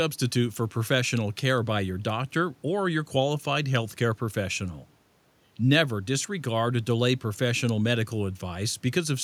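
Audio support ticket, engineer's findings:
No system faults found in the speech clip. Room noise sits about 40 dB below the speech and belongs to the recording environment, not the signal chain.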